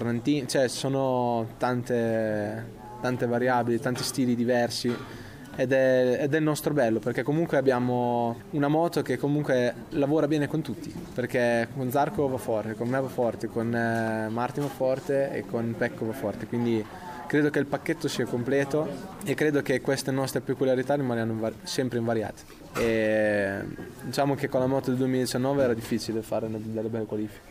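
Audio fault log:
No technical faults are audible anywhere in the signal.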